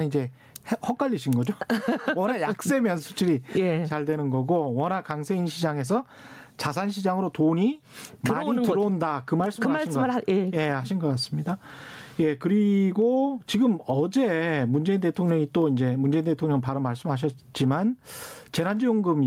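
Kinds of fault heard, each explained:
Gain pumping: throughout the speech, the gain swings by around 20 dB. This is likely from input gain set far too high, with a fast limiter clamping down on peaks, squashing loud and soft parts together.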